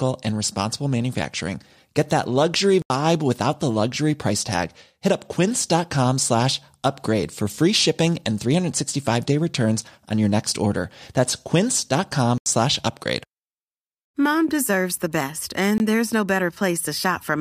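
Blocks of digital silence fall at 2.82–2.90 s, just after "that luxury", at 12.38–12.46 s, and at 15.78–15.80 s. The first two are 80 ms holes and the last is a 20 ms one. Each comes from output samples left as zeros, with the sound cutting out and back at abrupt edges.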